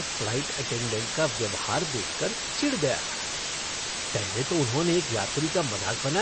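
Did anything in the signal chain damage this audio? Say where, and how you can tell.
Yes. The sample-format conversion stage reduced the audio to a very low bit depth with dither, leaving about 3 bits. Dither was added before rounding, so the quantisation error became a steady, even white hiss instead of gritty distortion. That hiss runs through the whole clip at about the same level as the speech itself, so the speech sits inside a constant noise floor. It does not pump or break up with the signal.

The second fault sounds like a codec stage, likely MP3 compression. Nothing reaches above 8.3 kHz, which points to a hard lowpass applied by an encoder short of bits, which fits a bitrate around 30 kbps. Throughout the clip the damage is plainly audible as a watery, swirling texture, where weak frequency components drop in and out from frame to frame, and consonant attacks smear.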